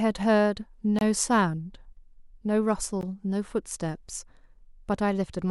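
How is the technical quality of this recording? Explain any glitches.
The recording has brief dropouts where separately encoded pieces were spliced together. A gap at a join of encoded pieces appears from 0.99 to 1.01 s (about 25 ms) and again at 3.01 s (about 16 ms), with joins spaced 2 s apart. Each piece kept its encoder's leading delay and end-of-file padding, so the speech briefly cuts to silence and resumes where it stopped. A waveform shows a flat notch with slightly smeared edges, and a spectrogram shows a thin vertical blank band.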